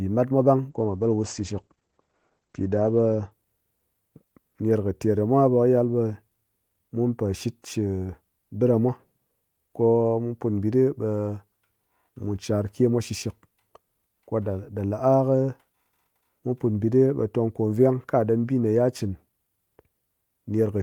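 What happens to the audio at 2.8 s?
At 2.8 s the speech sounds muffled and rough, with the top end missing above roughly 8 kHz, where it previously extended to about 20 kHz. This is a call bitrate drop lasting from 0.7 s to 3.37 s. The call's bandwidth estimate fell, so the encoder coded more coarsely and cut the high frequencies. The sound points to a fall from about 32 kbps to about 12 kbps, holding at the lowest rate for roughly 2.5 s.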